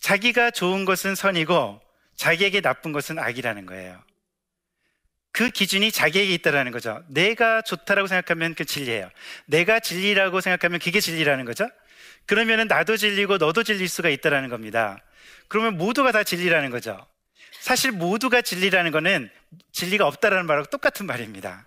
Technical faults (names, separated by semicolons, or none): block of digital silence